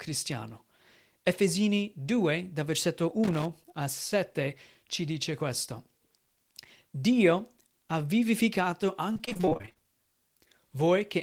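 A speech clip with two separate faults. Just after "dal versetto", from 3.24 to 3.45 s, there is a loose connector crackle: a worn or dirty contact repeatedly breaking and remaking the circuit, chopping the signal and throwing in pops wherever DC sits on the line. What sets it apart from dropout-type damage is its texture, an irregular scratchy burst of crackle and pops on top of the chopping. The second fault follows "ha vivificato", from 9.13 to 9.77 s: repeated packet loss giving a robotic sound. More than a dozen short holes, none longer than 26 ms, fall in quick succession, and each is patched by stretching the preceding sound, so about half of that stretch (around 320 ms) is concealment rather than real audio. Unlike the crackle, this has no added scratching; it is a choppy smearing where pieces of the speech are simply missing.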